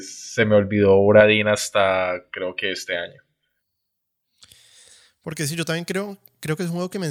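Pre-emphasis left on from 1.21 s to the end: the treble boost was never undone, leaving 10 kHz about 11 dB above 1 kHz, so speech sounds thin, bright and sibilant.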